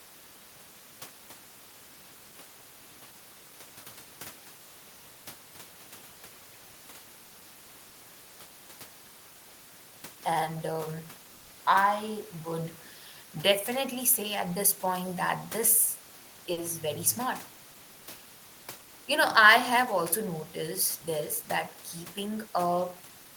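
Short concealed packet loss hits this speech recording at 7.89 to 7.95 s and again at 16.53 to 16.59 s. Each time about 40 ms of audio never arrived, and the receiver filled the hole by extending the preceding sound before blending back, leaving a brief smear or wobble. A burst of packet loss comes between them at 11.35 to 11.51 s. Here about 140 ms went missing in a row, and the decoder kept stretching and fading the last sound across the whole gap rather than dropping to silence. The speech then picks up further along, with that stretch gone.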